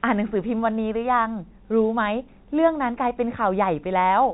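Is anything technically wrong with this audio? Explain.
No, nothing in this speech is technically wrong. It comes through the G.711 telephone coding path, so the sound is narrow-band with nothing above 4 kHz, as expected of a G.711 mu-law line at 64 kbps, and any quantisation noise riding under the level is faint at most.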